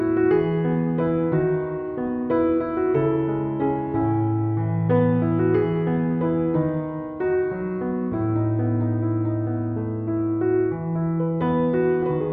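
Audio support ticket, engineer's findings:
No audible faults found, so there are no findings to log for this ticket.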